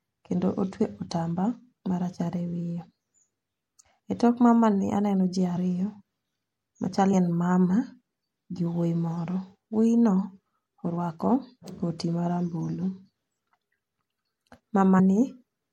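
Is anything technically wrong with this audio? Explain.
Yes. Throughout, the speech sounds watery and dull, with swirly highs. It is likely MP3 compression, and the damage fits a low bitrate near 64 kbps.

Compressed frames skipped: at 0.83, 3.83, 5.55, 7.12, 10.96 and 14.98 s the speech jumps ahead. Whole 26.1 ms frames are dropped, roughly a tenth of a second at 0.83 s and shorter elsewhere. Each join is a brief smeared blip.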